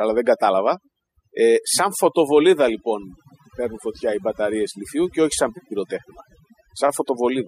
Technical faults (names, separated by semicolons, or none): overdone noise removal